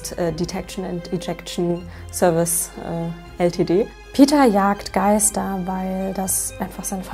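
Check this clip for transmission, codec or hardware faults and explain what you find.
One hardware fault is present. Mains hum runs throughout: a ground loop or nearby transformer leaks the 50 Hz power line into the signal, giving a steady low tone roughly 20 dB under the sound. Unlike broadband rumble, it holds one fixed pitch.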